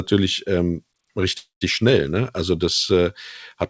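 At 1.38 s the speech stops and a fading buzz-like continuation of the last sound takes its place, falling to silence for about 140 ms before the speech resumes at 1.63 s. This is a call audio freeze, likely caused by packets held up in transit so that the jitter buffer ran empty and the receiver extended the last sound. No content is lost. The speech continues where it stopped, 231 ms later. The call codec leaves nothing above 8 kHz, which fits G.722.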